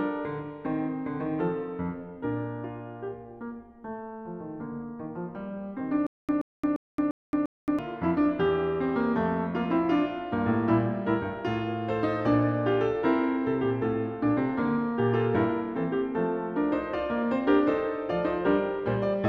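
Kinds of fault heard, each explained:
Stutter with silent gaps: From about 6.07 s to 7.79 s the music catches on a short chunk, roughly 126 ms long, and plays it five times, each followed by about 221 ms of dead digital silence, so the bursts come back on a steady 348 ms cycle. That's likely a playback or stream stall, where each retry replays the last fragment and then runs dry. Whatever music belonged in that stretch never arrives.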